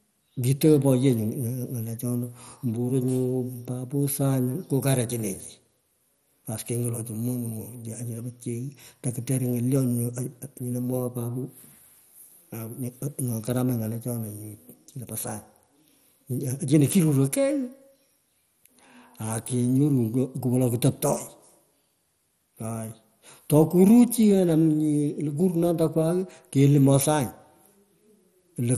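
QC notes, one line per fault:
Throughout, MP2 compression: the speech sounds dull and carries a plainly audible gurgling, granular roughness, and nothing is heard above 15 kHz. The likely cause is MPEG Layer II coding at a low bitrate, which fits about 64 kbps. The coder splits the signal into 32 sub-bands and runs short of bits, so upper bands switch off or flicker and the remaining ones are quantised coarsely, producing the grainy texture.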